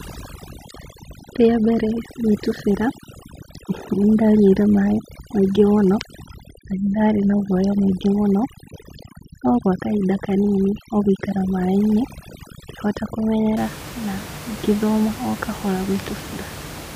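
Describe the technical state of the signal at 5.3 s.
At 5.3 s the gaps between phrases drop away and break up into twinkling specks. This is overdone noise removal, running from 0.0 to 13.57 s: an overly aggressive reduction stage pulls individual frequency bands down whenever they sit near its noise estimate, stripping quieter parts of the voice along with the room noise.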